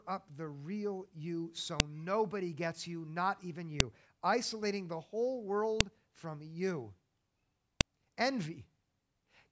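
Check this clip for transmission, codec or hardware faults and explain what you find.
One fault is present: a file header played as audio, occurring four times at a steady 2-second spacing, at 1.80, 3.80, 5.81 and 7.81 s. The first falls between "up the real you" and "nobody gets you not", the second after "gets you not even", and the third just after "isolating the whole". The audio was evidently assembled from 2-second pieces whose header bytes were never stripped, so those bytes are read as samples. Each produces a sharp, loud click lasting a few milliseconds. On a waveform this is a spike that jumps out of the speech envelope. On a spectrogram it is a thin full-height vertical line.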